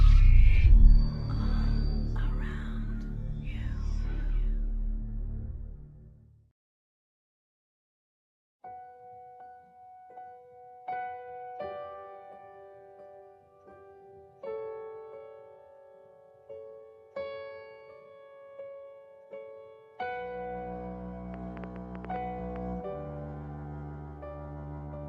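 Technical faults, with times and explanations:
21.34–22.57 s, train of clicks: about ten sharp ticks of near-identical shape, roughly as loud as the sound itself, arrive unevenly at about 6.6 per second for just over a second. Such repeated pulses are likely interference from nearby equipment or a faulty connection or power supply.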